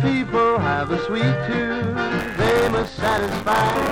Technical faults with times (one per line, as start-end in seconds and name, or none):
2.18-3.91 buffer tearing